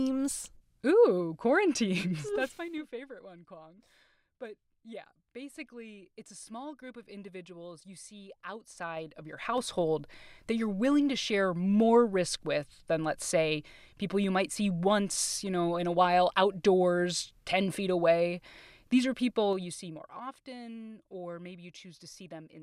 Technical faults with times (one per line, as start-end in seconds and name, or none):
2.24-2.79 zipper noise
8.66-9.81 zipper noise
19.20-20.33 zipper noise